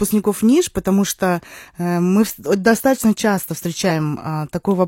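At 3.86 to 3.89 s, just after "э мы достаточно часто", damaged data in the compressed stream disrupts about 30 ms. The decoder misreads the corrupted frames and loses sync until it finds the next frame header. Unlike a dropout or click from the analogue chain, the fault originates in the coded data itself.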